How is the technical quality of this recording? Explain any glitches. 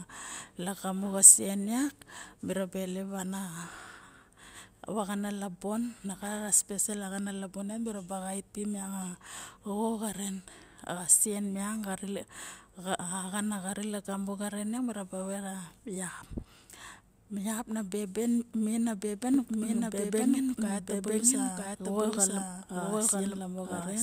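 The recording has one clear glitch: a doubled audio track from 19.34 s to the end of the clip. A second copy of the speech suddenly joins in, trailing the original by roughly a second and at about the same level, so everything is heard twice, out of step. The copy is full-band and dry, with no decay or room colour. It's likely a second, slower capture path being mixed in, or an edit leaving two offset copies on the timeline.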